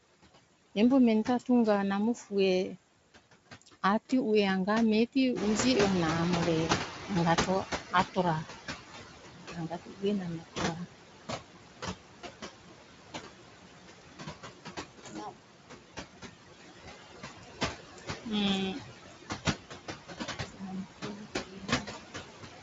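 Speech runs through an over-eager noise suppressor. Noise suppressor artifacts run the whole way. The background sinks in the pauses and swells back under the talking. This comes from the suppressor cutting every band it judges to be steady noise, frame by frame. The gating follows the speech, so the residue never sits still.

The suppressor also cuts speech. Soft consonants, word endings and quiet stretches get pulled down with the noise and sound swallowed. It happens from 0.44 to 2.32 s and from 3.3 to 4.12 s. These are brief losses, dipping by about 16 and about 17 dB. Longer stretches follow from 7.07 to 11.31 s and from 16.39 to 22.24 s, with drops of about 18 and about 16 dB. Another runs from 13.12 to 15.42 s, at about 18 dB. In each, the filter mistook low-level speech energy for noise.

The room noise jumps by about 12 dB at around five and a half seconds. After that it sits only about 7 dB under the speech. 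This causes the noise suppressor catching up. From 5.35 s the louder noise breaks through with less reduction at first. Over about 3.2 s it sinks by about 15 dB, until 8.53 s. The suppressor's noise estimate lagged behind the sudden change and had to adapt.

VoIP packet loss concealed by the speech codec appears twice, at 13.99 s and 20.87 s. Each gap fits a single lost 20 ms frame. The decoder filled it by extending its last pitch and filter with falling gain. The result is a brief stretched, fading sound, and the voice stays weak or distorted just afterwards. Light Speex coding colours the sound throughout.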